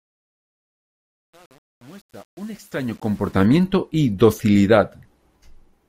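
From the start of the clip to 3.45 s, the speech fades in with truncation distortion on the fade. The gain stage keeps too few bits and applies no dither, consistent with an effective word length near 8 bits, so low-level samples collapse onto a handful of coarse steps. The quiet portion from 0.00 to about 3.15 s sounds gritty before the grain clears.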